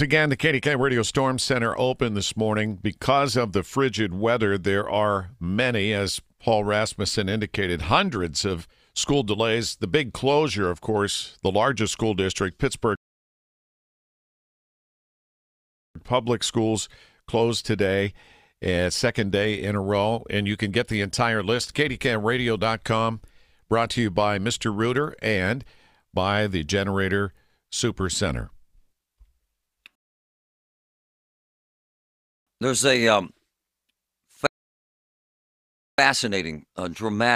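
At 12.95 s, after "the largest school district", then 29.95 s and 34.47 s, rebuffering stalls insert about 3.0, 2.5 and 1.5 s of silence. The player runs dry, then resumes exactly where it stopped, losing nothing, unlike a dropout.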